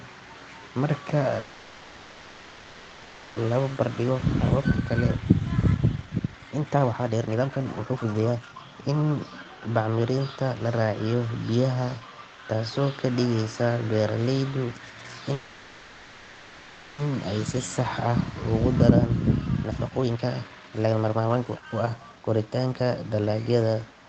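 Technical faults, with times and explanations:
1.39–3.38 s, call audio freeze: the sound stops moving forward and the last moment is held as a fading buzz for about 2.0 s, likely because delayed packets left the jitter buffer empty; playback then resumes where it paused, so nothing is lost, only a gap added.
3.76–9.89 s, jitter buffer speed-up: the speech runs at about 132% with its pitch unchanged, sounding hurried, as the receiver trims short pitch-period pieces repeatedly to shed roughly two seconds of built-up delay after the freeze.
15.33–17.00 s, call audio freeze: again the last sound is stretched into a decaying buzz, this time for about 1.65 s, while the buffer likely waits for late packets; the speech continues from the same point afterwards with nothing missing.
19.41–23.43 s, jitter buffer speed-up: just after "ah ugu daraan" the speech quickens to about 141% at normal pitch, the receiver cutting many small pitch-length slices to drain around one and a half seconds of excess buffered audio.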